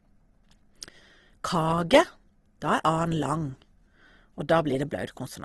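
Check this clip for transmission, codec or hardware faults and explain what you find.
One fault runs through the whole speech recording: Opus compression, likely. From start to end nothing sits above 12.2 kHz, a flat ceiling across a spectrogram. The speech sounds rough and grainy rather than swirly, since the codec's music mode keeps each band's energy but fills starved bands with folded or noise content, which fits a low bitrate near 16 kbps.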